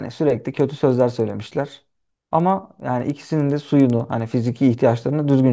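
Right from the start and all the way through, there's a steady tick about ten times a second, riding on the speech. That's a resampler restarted on every block: each 100 ms chunk was converted on its own, likely down to 16 kHz, leaving a small error at every block edge.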